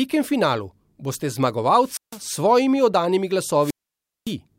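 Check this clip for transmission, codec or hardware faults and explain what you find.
Two wireless microphone squelch dropouts occur, at 1.81–2.23 s and 3.60–4.35 s. The FM link fades, hiss rises, and squelch mutes the speech for 156 ms, then 564 ms.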